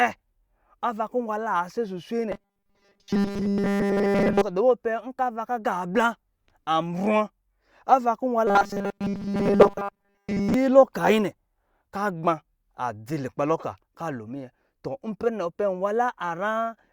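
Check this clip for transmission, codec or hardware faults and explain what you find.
Two bursts of robotic sound from repeated short buffers, 2.32 to 4.42 s and 8.47 to 10.54 s, most likely from audio arriving too seldom, so roughly 5 ms snippets repeat for most of the time. That imposes a rigid 200 Hz metallic buzz that only loosely tracks the speech.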